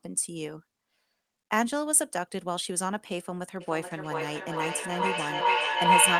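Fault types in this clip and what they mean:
Feedback howl: from 3.61 s to the end of the clip, sound leaving a loudspeaker is picked up again by a microphone in the same room and sent back round, gaining level on each pass. The repeats build rather than fade, narrowing onto a tone around 1 kHz, with the repeats coming roughly every 0.4 s, the loop's round-trip delay. It climbs to about 9 dB above the speech and is still sounding when the clip ends.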